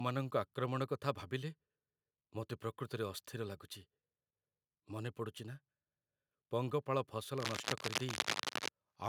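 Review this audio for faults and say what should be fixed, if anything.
Cable scratch noise, 7.37 to 8.69 s. Ragged crackling covers the speech at roughly equal level. Likely a worn connector shifting, so contact resistance jumps. Replace worn cables and secure every connection so nothing moves during recording.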